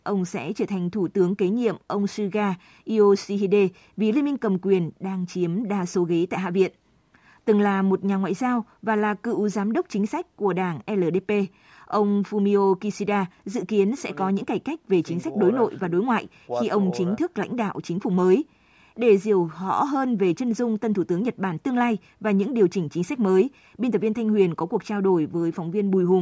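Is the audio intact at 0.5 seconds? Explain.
Yes, at 0.5 seconds the speech is intact, with no dropout, click or distortion, just the narrowed, bass-trimmed sound of call microphone processing.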